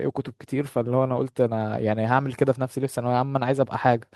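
No faults can be heard anywhere in this speech recording. No dropouts, clicks, distortion or other breaks in the signal show up at any point.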